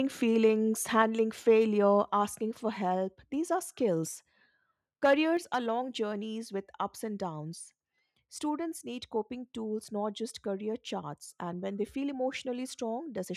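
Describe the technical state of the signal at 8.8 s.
At 8.8 s the speech signal is intact, with no technical fault audible at that moment.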